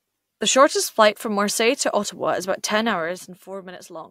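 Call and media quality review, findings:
Zipper noise, 2.78–3.49 s, after "is about": gain ramp applied unsmoothed in 1 dB steps, about fifteen per second, dropping roughly 10 dB; each step clicks, giving audible ticking over the speech.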